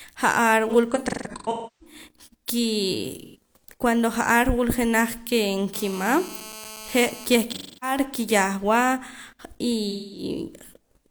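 AAC frame loss with concealment smears the speech at 0.69–1.95 s (gaps totalling about 0.7 s, longest around 0.3 s), 3.20–3.36 s, 7.48–7.97 s and 9.91–10.23 s. The decoder rebuilds lost stretches from the last good spectrum, so they sound noisy and phasey rather than silent like a plain dropout. From 5.74 to 7.26 s, GSM phone buzz adds a steady, raspy 217 Hz rasp rich in harmonics, about 18 dB below the speech. It stays fixed regardless of the speech, and its buzzy edge and rate set it apart from 50 or 60 Hz mains hum.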